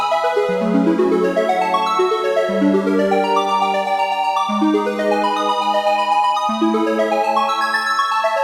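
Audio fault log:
No fault to log for this audio.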